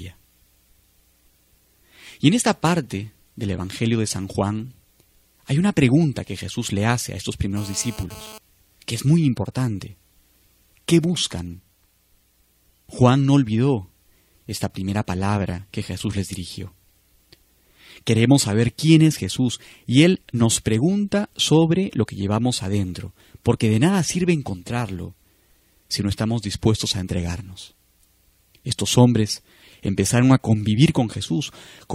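From 6.9 to 8.38 s, GSM phone buzz: rectified radio bursts give a harmonic-rich 217 Hz rasp about 20 dB down, unlike 50 or 60 Hz mains hum.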